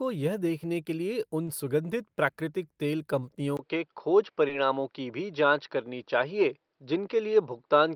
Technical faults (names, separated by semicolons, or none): short concealed packet loss; input switched to a poorer device